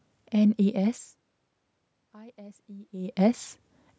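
From 2.12 to 3.24 s in this speech clip, the voice and the room noise behind it swell together, slowly and evenly, rather than the voice alone coming forward. This is automatic gain rising. The level reaching the microphone fell by about 24 dB, so the gain control judged the input too quiet and raised its gain by about 4 dB over roughly a second. The level changes around 1 s and 3 s come from the talker moving.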